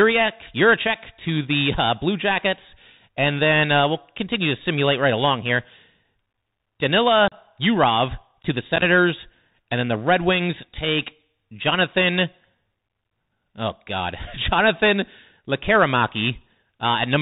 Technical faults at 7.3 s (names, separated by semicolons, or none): Bluetooth CVSD headset codec; unconcealed Bluetooth headset packet loss